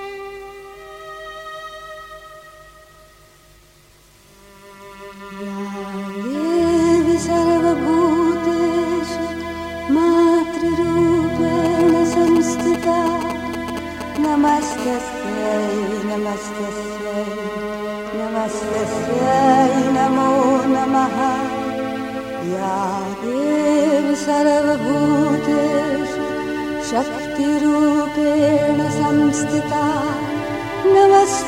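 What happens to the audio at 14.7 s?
GSM signalling bursts, from 11.65 to 14.73 s, end there: a nearby 2G phone's short radio bursts are rectified into galloping ticks and brief 217 Hz buzzes, fairly loud at roughly 10 dB below the signal. At 14.78 s, GSM phone buzz takes over until 17.33 s. The phone is now in a call and transmits steadily at 217 Hz, so the sound becomes a continuous raspy, harmonic-rich buzz about 22 dB below the signal, not broken into bursts.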